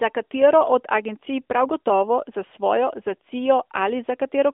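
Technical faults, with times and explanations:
No technical faults detected.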